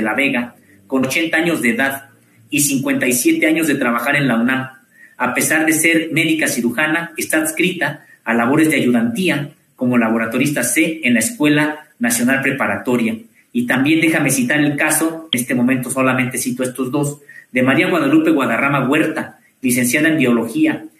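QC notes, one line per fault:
1.02–1.04 s and 15.33 s: damaged data in a compressed stream. Corrupted bytes make the decoder misread frames and lose sync, giving brief glitches.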